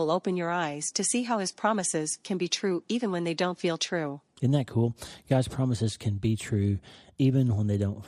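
From start to end the speech carries what is likely MP2 compression at a low rate, with damage that fits something around 80 kbps. The encoder divides the signal into 32 equal sub-bands and, starved of bits, shuts off the upper bands while quantising the rest coarsely. The result is dull, lacking top end, with a gurgling, granular roughness as bands flicker in and out under the speech.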